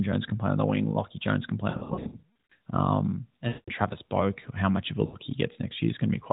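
The speech warbles, smears and sinks toward silence three times: from 1.70 to 2.52 s after "can play", in scattered dropouts with stretches up to about 140 ms; from 3.48 to 3.70 s; and in a short dip from 5.06 to 5.16 s after "how much of a". These are lost AMR speech frames. Frames damaged in transmission were discarded, and the AMR-NB decoder filled each gap by repeating its last good pitch and vocal tract settings at falling gain.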